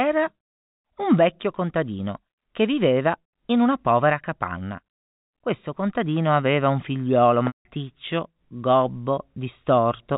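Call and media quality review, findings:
Packet loss with pitch repetition, 7.47 to 7.65 s, just after "contadino aveva un figliuolo": about 180 ms of stream missing, consistent with six 30 ms packets. Concealment repeats the last pitch period, so the sound holds briefly with a buzzy tone and fades out over about 50 ms. The rest of the gap is silent, and the audio cross-fades back in. The G.711 mu-law path keeps the sound below 4 kHz throughout.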